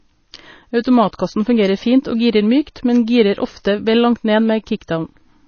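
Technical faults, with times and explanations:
Throughout, MP3 compression: the encoder was likely starved of bits, which fits a rate around 24 kbps, so it removed everything above 6.5 kHz and switched weak frequency lines on and off between frames, leaving the speech dull, watery and swirly, with smeared onsets.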